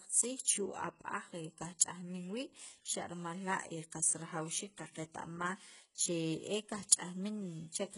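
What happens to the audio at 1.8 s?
A transform codec spread its quantisation noise across a whole block, and a sharp attack near 1.79 s fell late in that block, so noise meant for the loud onset leaked about 15 ms ahead of it. This is pre-echo: a brief hiss just before the attack, which itself sounds softened and smeared.

Underneath this, the whole clip is heavily damaged by what is likely HE-AAC compression at a rate that fits roughly 12 kbps. Only the lower spectrum is coded and the treble is rebuilt from copied bands, with nothing above 11.1 kHz. The upper range sounds synthetic, and s sounds come out gritty and metallic.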